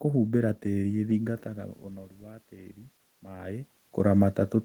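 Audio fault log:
1.22 to 4.28 s, automatic gain rising: the input level drops by about 19 dB after the talker moves away from the microphone around 1 s, and the automatic gain control slowly raises its gain by about 4 dB over three seconds. Voice and room noise swell together, so the background rises along with the speech. On the waveform the envelope widens gradually, even in pauses. On a spectrogram the noise floor brightens evenly across all bands.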